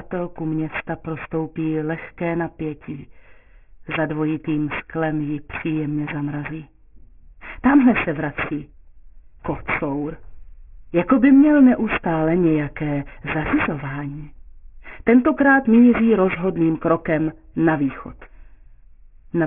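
Aliasing runs through the whole clip. The audio appears to have been resampled downward, consistent with a drop to about a 6 kHz rate, with no anti-alias filter applied first. Everything above the fold point at 3 kHz has mirrored back down into the passband as false, unrelated tones. These sit fairly high, only somewhat below the real signal, giving bright sounds a gritty, metallic edge. On a spectrogram, energy runs hard up to 3 kHz with mirrored, inverted-looking components below it.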